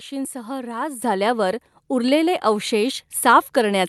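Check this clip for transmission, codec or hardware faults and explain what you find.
There are two microphone volume steps in the speech; the call path's audio tops out around 12 kHz.

Microphone volume stepped up at 1.02 s (about +8 dB) and 2.04 s (about +2 dB): automatic gain control raised the input volume in single steps, so voice and background jump together. On a waveform the envelope widens abruptly, and a spectrogram brightens evenly across all frequencies.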